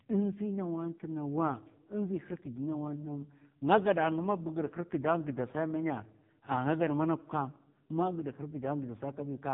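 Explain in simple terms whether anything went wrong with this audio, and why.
Something did go wrong, and it lasts the whole recording. The speech has been squeezed through the AMR narrowband mobile codec, the one older mobile phones use. It rebuilds the voice from a simple model of the throat and mouth instead of keeping the real sound. Here it is squeezed very hard, so the voice sounds buzzy and robotic. Nothing above about 3.8 kHz survives, which makes it dull and muffled, like a bad phone call.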